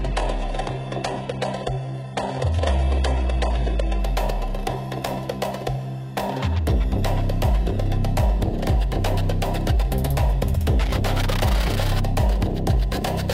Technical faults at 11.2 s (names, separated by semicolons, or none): none